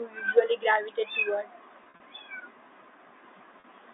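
Right after "gravitate toward", from 1.84 to 2.00 s, there's packet loss with pitch repetition. About 100 ms drops out in bits across 160 ms, the longest gap 40 ms, which fits five lost packets. The receiver loops the last pitch period to fill each hole, so it sounds briefly held and buzzy. It happens again at 3.60 s: a 40 ms gap, likely two packets, heard as a short buzzy hold. All of this sits within the G.711 telephone band, 300 Hz to 3.7 kHz.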